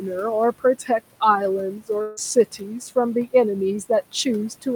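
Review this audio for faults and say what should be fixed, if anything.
Noise suppressor artifacts run through the whole clip. The suppressor lowers the room noise, which sits about 17 dB below the speech, by about 17 dB between phrases and lets it rise under the speech. On a spectrogram, the background shows patchy, flickering holes. Prevention: use gentler suppression or a longer noise estimate.

Speech cut by the noise suppressor occurs from 0.52 to 0.9 s. Parts of the speech, around 150 ms in all, are pulled down by up to about 15 dB and sound swallowed. The waveform shows dented, shrunken syllables there, and the spectrogram shows faded speech energy. Prevention: lower the suppression depth so quiet speech mistaken for noise is cut less.

A long network dropout is the likely cause of the fault from 2.01 to 2.19 s. About 160 ms of audio went missing and was filled with a fading continuation of the previous sound for about 155 ms, with no silence. 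A spectrogram shows a smeared, fading continuation where the speech detail should be. Prevention: add jitter buffering and packet redundancy on the network path.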